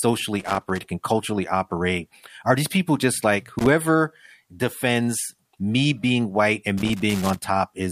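Irregular scratchy crackle chops the speech at 0.40–0.79 s, 3.59–3.70 s and 6.78–7.44 s: loose connector crackle, a worn contact making and breaking as it shifts.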